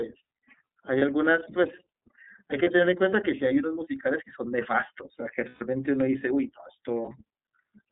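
The speech runs through the iLBC codec from start to finish. The sound is band-limited to roughly 200 Hz to 3.7 kHz, consistent with 13.3 kbps iLBC in 30 ms frames. Each frame's excitation is coded on its own, and the voice is plainly rough and synthetic.

Packets carrying lost iLBC frames drop out at 0.98 to 1.02 s and 2.63 to 2.67 s, each fitting a single 30 ms frame, then at 5.49 to 5.62 s and 7.02 to 7.12 s. The decoder fills each gap by repeating the last pitch cycle mixed with noise, heard as a brief held, buzzy vowel. The speech recovers almost immediately afterwards.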